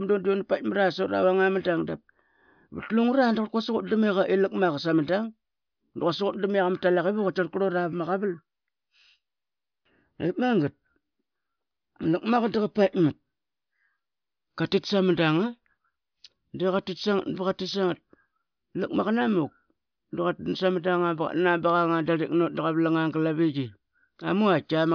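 Speech recording with no audible technical faults.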